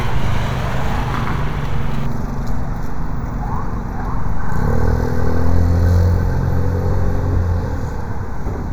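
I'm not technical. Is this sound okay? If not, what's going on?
No. From about 2.06 s to the end, there's channel delay causing comb filtering. One of the two stereo channels arrives a tiny fraction of a millisecond later than the other, and when they're combined into one, parts of the sound they share cancel each other out at regularly spaced pitches, the first around 3 kHz. To your ear, the sound turns hollow and phasey, as if heard through a tube, with some of its brightness missing.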